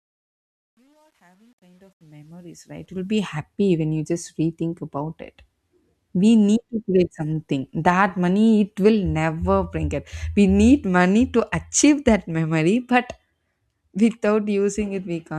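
A fade-in stage keeping too few bits, consistent with about 10-bit resolution and no dither, causes truncation distortion on a fade from 0.0 to 3.38 s. Until about 2.38 s the quiet speech turns gritty, clearing before "when you just rethink".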